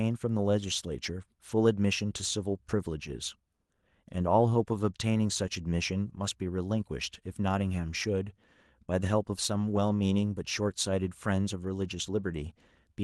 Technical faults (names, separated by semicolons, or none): lost packet rebuilt from error correction